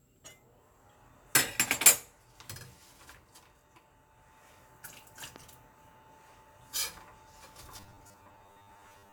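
A clip of everyday sound with two faults. At 5.36 to 5.38 s a single loud pop cuts through, about 10 dB above the sound, which continues beneath it. It is likely a voltage spike from a plug, switch or driver glitch. From 7.78 s to the end at 9.12 s, the audio turns into robotic sound from repeated short buffers: a rigid, metallic 100 Hz buzz, with roughly half the material repeated. The likely cause is late-arriving audio, each 10 ms chunk replayed to fill the gaps.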